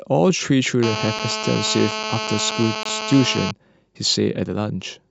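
From 0.83 s to 3.51 s a hard, raspy buzz at 217 Hz, rich in harmonics and about 6 dB below the speech, sits steadily under everything. This is GSM phone buzz: a 2G phone on a call nearby pulses its transmitter 217 times a second, and the audio circuitry rectifies those radio bursts.

At 1.19 s and again at 2.50 s a single sharp click cuts through, each a thin vertical line across the spectrum. These are likely dropped samples. A fraction of a millisecond of the stream goes missing, so the waveform jumps abruptly to a later value without removing any audible sound.

From 2.83 s to 2.85 s the speech stops dead for about 20 ms, with hard edges on both sides. This is a gap between stream segments. The time stamps of two consecutive segments leave a small hole that the player fills with silence. Nothing of the audio itself is lost.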